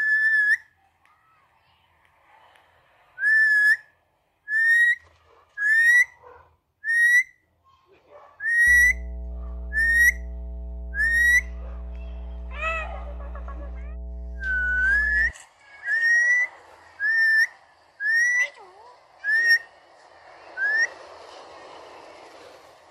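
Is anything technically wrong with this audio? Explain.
Yes. From 8.67 to 15.31 s there is mains hum: a ground loop or nearby transformer lets the 60 Hz power line leak into the signal path, laying a steady low drone with some low harmonics under the sound, roughly 15 dB below it.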